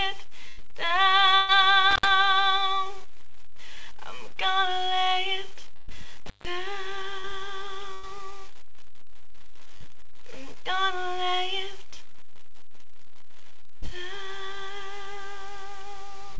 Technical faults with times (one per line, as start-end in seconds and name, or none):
0.48-0.59 burst of packet loss
1.35-1.50 burst of packet loss
1.91-2.08 intermittent contact
5.76-5.90 burst of packet loss
6.26-6.45 intermittent contact
7.20-7.26 short concealed packet loss
7.94-8.05 burst of packet loss
9.77-9.83 short concealed packet loss
13.77-13.84 burst of packet loss